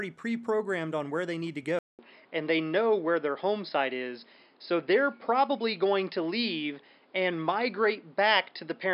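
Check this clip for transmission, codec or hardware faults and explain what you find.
One fault is present. From 1.79 s, after "where they need to", the input likely switched to a poorer device. A 200 ms silence is followed by sound capped at 5.2 kHz, a level shift of about 5 dB, and a new noise floor. A codec bandwidth drop would not bring that noise and gap.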